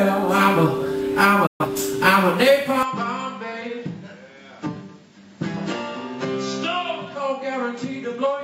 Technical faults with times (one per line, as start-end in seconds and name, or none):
1.46-1.66 digital broadcast dropout
2.83-8.44 input switched to a poorer device